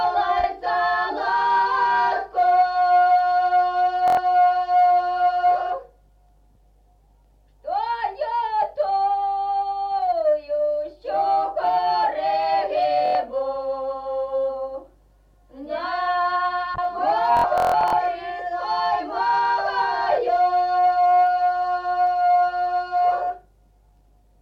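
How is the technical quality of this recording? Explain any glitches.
The recording has two kinds of glitch: a faint, regular ticking that runs almost the whole way through, and three bursts of stutter.

Clock slip clicks run from 0.38 s to 24.08 s. They are soft ticks roughly every 0.4 s, about seventy in all, each a single-sample jump. They are clearest on loud, bright or sustained passages and vanish in silence. The likely cause is two devices running on unsynchronised clocks, drifting by something like 50 parts per million, so one sample is dropped or repeated each time the gap reaches a whole sample.

Bluetooth stutter is heard at 4.08 to 4.17 s, at 13.06 to 13.15 s, and from 17.37 to 17.93 s. The first two are short buzzy repeats covering about 93 ms each, which fits roughly four lost packets. The third is a broken, machine-gun stutter: about 300 ms is missing across that half second, with the longest gap near 160 ms. 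In each case the receiver replayed its last short buffer while data was late or lost, then jumped ahead as if the sound had played on.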